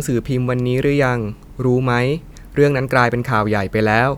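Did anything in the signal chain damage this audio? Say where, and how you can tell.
No, nothing in this speech stood out on listening as damage from any stage of the signal chain.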